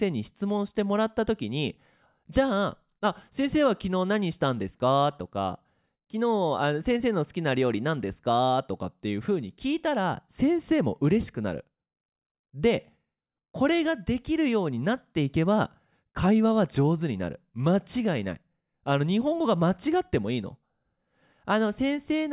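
No technical faults can be heard anywhere in the speech.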